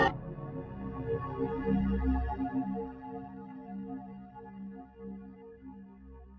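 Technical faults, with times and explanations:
Throughout, noise suppressor applied to music or sounds: a speech-tuned suppressor treats held tones and tails as noise, pulling them down by about 10 dB while attacks pass.
3.26 to 6.38 s, time-stretched section: the pace drops to 0.655 times normal, dragging while pitch holds, likely from software repeating short pieces to lengthen the audio.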